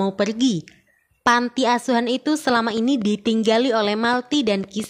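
A train of clicks runs from 2.50 s to 4.85 s, near the end of the sound. Short pulses of much the same shape arrive about 6.8 times per second at an uneven pace, roughly fifteen in all, peaking at about the level of the sound itself. They come from outside the sound, likely interference from nearby equipment or a faulty connection or power supply, and are heard as irregular ticking or popping laid over the sound and through its pauses.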